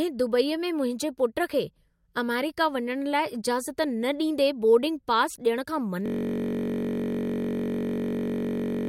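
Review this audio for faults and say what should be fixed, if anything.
A system hang loop starts at 6.06 s and runs to the end. The system froze, but the hardware kept replaying one buffer. A 21.33 ms slice repeats as a steady 46.9 Hz buzz. That fits a 1024-sample buffer. A watchdog should mute output when the buffer stops refilling.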